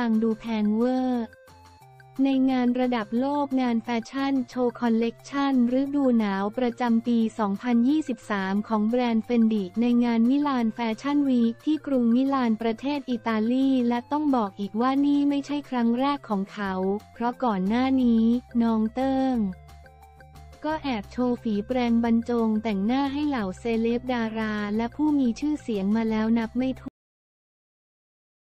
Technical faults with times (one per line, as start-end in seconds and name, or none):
26.88-28.56 cut-off end